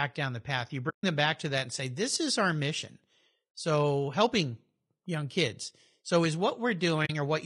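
Speech with a rough, grainy texture throughout, most likely from low-delay AAC compression such as AAC-ELD, with plainly audible damage consistent with a bitrate near 32 kbps. AAC frame loss with muting leaves soft-faded silent holes where lost frames were zeroed: about 140 ms at 0.89–1.04 s and about 40 ms at 7.05–7.10 s.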